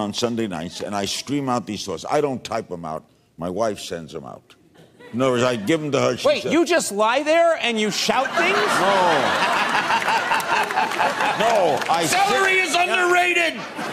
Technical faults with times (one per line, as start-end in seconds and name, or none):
none